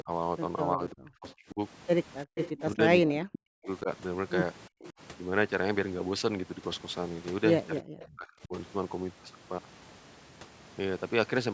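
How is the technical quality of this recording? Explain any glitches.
The recording has two recurring call-path problems, with the sound band-limited to nothing above 8 kHz by ordinary call processing.

Speech suppressed in double talk: from 0.01 to 5.0 s, the voice repeatedly dips or drops out, by about 40 dB at worst and for roughly two seconds in total. A shorter dip of about 30 dB, totalling roughly half a second, occurs between 7.82 and 8.54 s. The likely cause is an echo canceller that, with both sides talking, treated the talker as echo and turned it down.

Echo leak: a copy of the sound trails by 367 ms. It appears at 1.28 to 1.34 s at about −30 dB, then at 2.35 to 3.66 s strongly at about −10 dB, at 4.83 to 4.89 s, and at 7.99 to 8.14 s, both at about −25 dB. It likely comes from a loudspeaker on one side whose echo canceller let residual pickup return.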